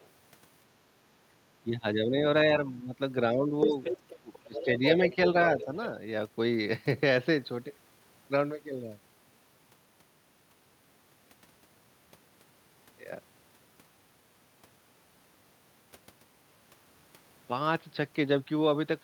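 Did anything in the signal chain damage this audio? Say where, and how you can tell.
Yes, in the call processing. Speech suppressed in double talk: the talker dips by about 5 to 20 dB at 1.62–2.15, 2.67–2.95, 3.32–5.17 and 5.55–5.68 s. The waveform envelope pinches. An echo canceller likely ducked both voices together.

The other side's voice leaking through appears at 0.00–0.09, 3.61–4.90 and 5.59–5.87 s. It starts as a faint trace, then rises to about 5 dB below the talker, then sits about 15 dB below. A spectrogram shows a second, overlapping harmonic stack, likely residual loudspeaker echo the canceller missed.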